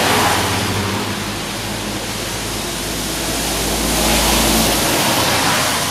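The recording of sounds has no audible technical faults at any point in the signal.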